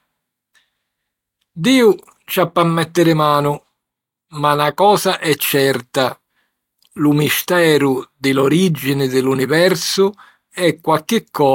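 Throughout, sample clock jitter of about a microsecond adds a faint hiss, roughly 40 dB down, tracking loud, bright speech; spectrograms show high-frequency haze vanishing in pauses.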